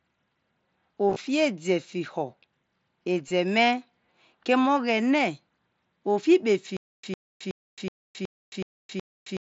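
At 1.09 s a short buzzy, tonal patch appears for about 75 ms. Its roughly 52 ms of losses are scattered, and the longest run is about 23 ms. A second, briefer buzz follows at 3.28 to 3.31 s, lasting about 23 ms, with a slight warble as real audio resumes. This is concealed Bluetooth headset packet loss. Voice packets on the headset link went missing, and the receiver filled each hole by continuing the waveform from the best-matching recent stretch, which produces a held, buzzy tone. The mSBC headset codec carrying the link shows light graininess on loud sounds.

From 6.77 s to the end, the sound turns into a stutter with silent gaps. A single fragment of about 104 ms plays, then drops into about 268 ms of dead digital silence, and the same fragment returns every 372 ms, seven times in all. Whatever should have played there is simply missing. The likely cause is a stalled player or stream that replayed its last buffered fragment at each retry and then ran empty.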